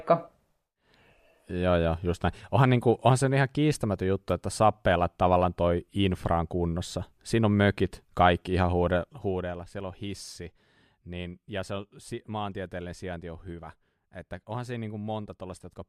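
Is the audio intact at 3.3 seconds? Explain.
Yes, the speech at 3.3 seconds is intact, with no fault at that moment.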